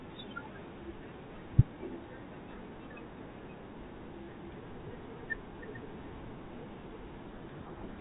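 From 7.26 to 7.99 s the receiver reads the G.726 code words with their bits in the wrong order, a codec payload misread. Each decoded difference value is wrong, so the speech, carried with only light coding damage by the 32 kbit/s path until then, is buried under harsh distortion.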